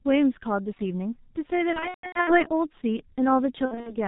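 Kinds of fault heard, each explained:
G.723.1 codec: The speech sounds muffled and hoarse, with smeared consonants and nothing above 4 kHz, from heavy coding at roughly 6 kbit/s in 30 ms frames.
VoIP packet loss concealed by the speech codec: Around 1.73 to 2.49 s and 3.65 to 3.96 s, the speech stretches and fades as the decoder extrapolates its last pitch across lost packets.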